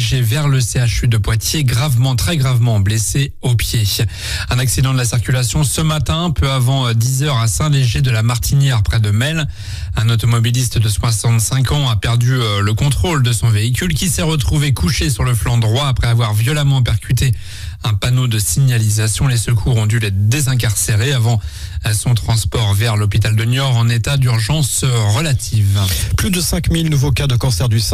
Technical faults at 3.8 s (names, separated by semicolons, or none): none